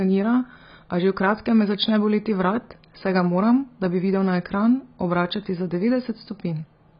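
AAC compression runs throughout the speech: nothing sounds above 5.1 kHz, and heavy damage leaves it dull and smeared. The likely cause is AAC-LC coding at a very low bitrate, which fits roughly 16 kbps, where the encoder discards high frequencies and coarsely quantises the rest.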